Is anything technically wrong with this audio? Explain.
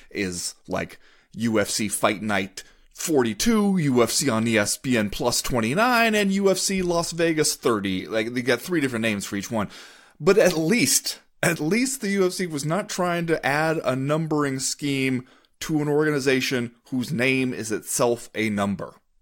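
No, nothing technically wrong stood out on listening to this speech recording.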